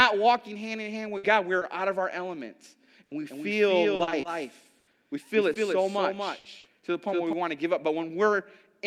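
Packet loss and a doubled signal mar this speech recording. In four bursts of packet loss, at 1.17 to 1.25 s, 3.05 to 3.13 s, 6.39 to 6.47 s and 6.59 to 6.67 s, several consecutive packets failed to arrive. Each time, the receiver stretched the last sound into a fading buzz or hiss for about 60 ms before the speech jumps ahead. Another 60 ms or so of speech is missing at each of those jumps. A short concealed packet loss at 1.59 to 1.63 s dropped only about 20 ms, which the decoder patched by extending the preceding sound. It passes as a brief smear or wobble, and a short consonant there may disappear. From 3.29 to 7.33 s there is a doubled audio track. A second capture path or an edit likely mixed in another copy of the signal. That copy trails by about a fifth of a second and sits a few dB below the original. It is dry, full-band and starts and stops abruptly, giving a clean slapback rather than room echo. 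Inside that stretch, between 3.95 and 5.57 s, repeated packet loss (robotic sound) sets in. Seven separate gaps, the longest 80 ms, were each filled by continuing the last sound. Together they make up about 15% of that span, and the result is choppy speech with pieces missing.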